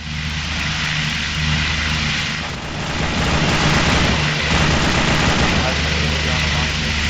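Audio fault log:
throughout: resampler restarted on every block. A small tick repeats every 50 ms, forming a faint 20 Hz buzz heard only while sound plays. Each block was converted alone, with no true neighbouring samples at its edges. This fits upsampling from 16 kHz to 48 kHz.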